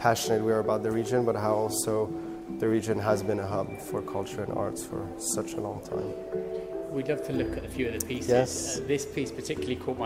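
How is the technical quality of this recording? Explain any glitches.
No glitches or technical faults can be heard anywhere here.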